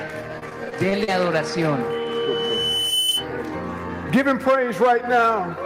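From 0.39 to 1.09 s there's repeated packet loss, and you get that choppy, robotic sound. Six gaps, about 120 ms missing in total and the longest around 40 ms, each patched by stretching out the previous bit, so about 17% of that span is filler.

Then from 1.90 to 3.28 s there's a loudspeaker feedback squeal: the mic is picking up its own speaker, and the loop runs away at 3 kHz. The tone swells over roughly a second until it sits about 5 dB above the rest of the sound.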